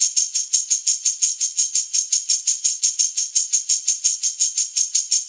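No technical fault can be heard in this audio, which has come through a WebRTC call path and has nothing above 8 kHz, a band limit that fits a G.722 wideband codec running at 64 kbps.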